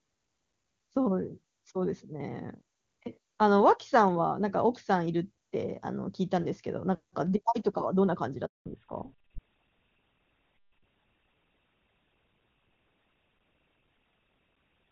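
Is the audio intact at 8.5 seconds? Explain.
No. A handover gap silences the audio from 8.46 to 8.66 s, about 200 ms. As the call switched networks, no frames arrived, so the sound fades within tens of milliseconds into clean silence. That fade into true silence, with no buzzy or repeated concealment fill, distinguishes it from packet loss.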